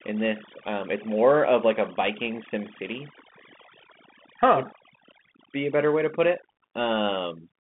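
A speech recording carries two faults throughout. Overdone noise removal, set far too strong, pushed bands near the noise floor down or off, leaving near-silent gaps with twinkling specks. The audio also passed through a Bluetooth CVSD headset codec, which fits a 64 kbps link. The band runs about 150 Hz to 3.5 kHz, with nothing above 3.8 kHz, and plainly audible scratchy, granular step-size distortion.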